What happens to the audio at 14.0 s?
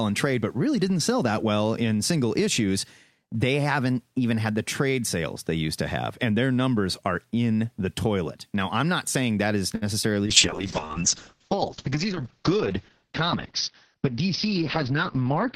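At 14.0 s two faults overlap. A jitter buffer speed-up runs from 13.94 to 14.22 s. The receiver's buffer had built up more audio than its target, so it trimmed short pitch-period-sized slices in quick succession, removing roughly 50 ms in total. Speech plays at about 115% speed with unchanged pitch and sounds briefly hurried. On a waveform the periodic cycles keep their length, with small splice points where cycles were dropped.

This sits inside a call bitrate drop that begins at 10.27 s, just after "not saying that is", and lasts to the end of the clip. The bandwidth estimate fell and the encoder went from 64 kbps to 7 kbps, which forces much coarser coding and narrows the audio band from 20 kHz to 6 kHz. The speech sounds muffled, rough and watery. On a spectrogram, energy above 6 kHz is cut off sharply, leaving a flat empty band.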